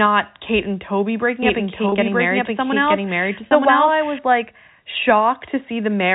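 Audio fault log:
1.43–4.19 s, doubled audio track: a second copy of the sound runs about a second behind the first and at roughly the same level, so the two overlap audibly. It is not an echo or reverb. The copy is full-band, has no decay or room colour, and switches on and off abruptly at the edges of this span. That points to the audio being captured twice, likely through a slower second path or an edit that left two copies out of step.
1.89–1.92 s and 3.48–3.51 s, packet loss with pitch repetition: each gap is a single lost packet of about 30 ms. The receiver filled it by repeating the last pitch period, so instead of a silent dropout or a click you hear a brief held, slightly buzzy tone before the sound continues. That sustained pitch is what separates this from a plain gap. The narrow telephone band around it, with nothing above 4 kHz, is the G.711 coding working as intended.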